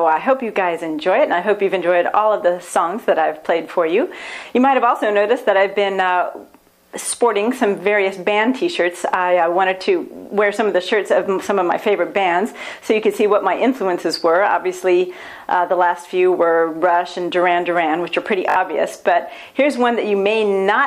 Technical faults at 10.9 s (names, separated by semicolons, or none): none